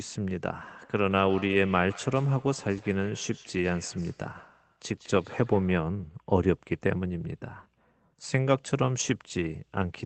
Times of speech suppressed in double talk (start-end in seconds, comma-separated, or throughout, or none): none